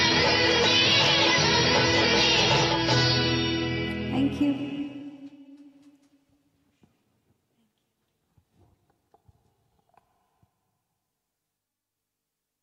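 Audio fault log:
No audible faults detected.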